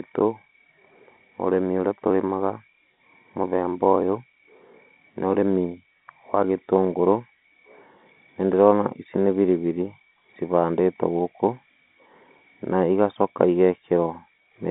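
No technical faults can be heard in this speech.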